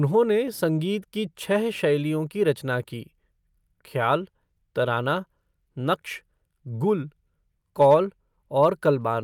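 At 7.81 to 7.95 s, and again briefly at 8.63 to 8.66 s, the speech shows hard clipping. The peaks are driven about 2 dB past what a stage in the chain can pass, so the waveform tops are cut flat. That flattening adds high harmonics, and since the overload is small, it is heard as short crackle riding on the loudest moments rather than a continuous fuzz.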